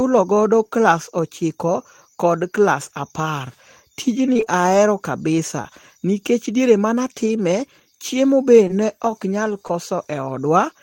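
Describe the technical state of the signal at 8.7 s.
Short concealed packet loss at 8.68–8.71 s, between "chiemo be" and "ok nyal": about 20 ms went missing, and the receiver extrapolated prior audio across it, leaving a brief smear.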